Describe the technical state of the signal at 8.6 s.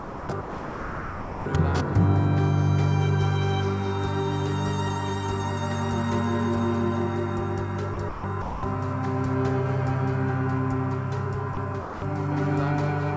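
At 8.6 s the signal sits inside a short stretch of sound dropped by the voice detector, running from 8.42 to 8.63 s. For those 210 ms the audio gives way to a steady, featureless noise bed before the original sound resumes. The likely cause is the sender's voice detector judging that passage to be background and halting transmission, with the receiver filling the gap with generated comfort noise. Throughout, the band stops at 8 kHz, as expected from a wideband call codec.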